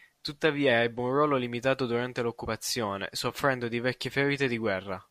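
At 2.44 s, just after "un ruolo limitato durante", compressed frames are skipped: the speech lurches forward by roughly 50 ms, which fits two lost 24 ms frames. Unlike a dropout, there is no silent gap.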